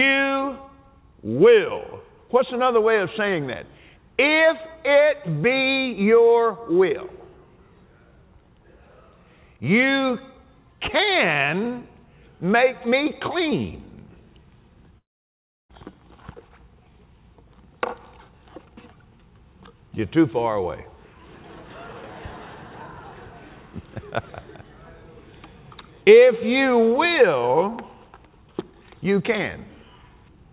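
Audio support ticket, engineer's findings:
Long network dropout, 14.98–15.71 s: packets likely lost in transit for 0.72 s, so the receiver conceals the gap. The last sound stretches into a fading buzz or hiss, then 0.67 s of silence. Audio resumes with that stretch gone. The G.711 call path stays band-limited to 4 kHz throughout.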